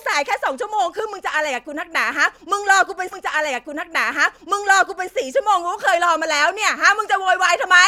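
At 3.11 s the speech jumps back and a stretch of it plays a second time, running until 5.11 s, with a small blip marking the seam where playback leaps backward. This is a stream segment repeated: the player fetched or queued the same chunk of the stream twice, so two seconds of already-heard audio are inserted into the programme, lengthening it by that amount before normal playback resumes.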